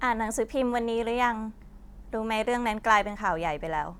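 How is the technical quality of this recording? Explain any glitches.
No technical faults can be heard in the speech signal, so there is nothing here to explain.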